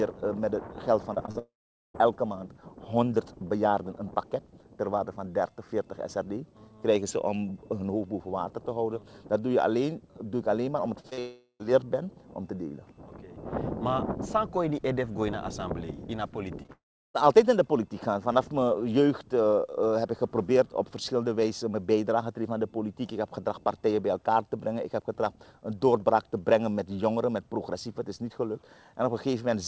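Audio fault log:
1.14–1.37 s and 11.00–11.19 s: repeated packet loss (robotic sound). Three gaps in each span, the longest 34 ms and 37 ms, leave about 29% and 47% of the audio concealed. The receiver keeps extending the last sound across each hole, so the stretch turns choppy.
1.39–1.96 s, 11.19–11.65 s and 16.72–17.16 s: long network dropout. About 560, 400 and 420 ms of audio never plays. The concealed tail fades into silence lasting 440, 80 and 350 ms before the audio resumes with that portion lost. The likely cause is a lapse in packet delivery.
16.63–16.70 s: short concealed packet loss. Two back-to-back 20 ms holes are filled by continuing the preceding sound and blending it back, giving a brief smear or wobble. It comes just ahead of the third dropout.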